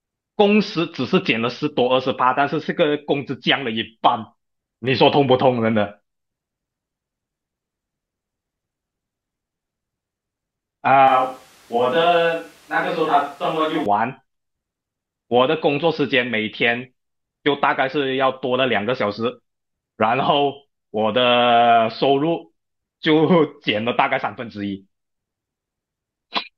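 From 11.08 s to 13.86 s the speech suddenly turns roomy and hollow, losing its low end, then snaps back just as abruptly. The overall level barely changes, but more of the room comes through, with background noise about 30 dB below the speech. This is most likely a switch to a distant microphone: the close microphone's signal dropped out or was left out for that stretch, and a mic farther from the talker filled in.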